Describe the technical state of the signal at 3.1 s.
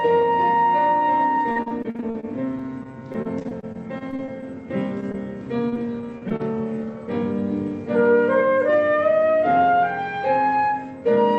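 At 3.1 s the sound is choppy and robotic, with small pieces dropping out. This is repeated packet loss, running from about 1.51 s to 4.44 s. Around two dozen short holes, the longest about 41 ms, follow one another closely. Each hole is patched by stretching the preceding sound, so about a fifth of that stretch is concealment rather than real audio, all heard through the call path's roughly 8 kHz bandwidth.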